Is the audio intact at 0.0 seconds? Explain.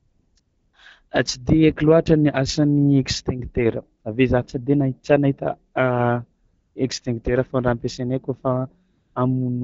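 No. From 0.0 to 0.35 s there is AMR comfort noise: no speech frames were sent, so the receiver substitutes steady, smooth synthetic noise for the real background.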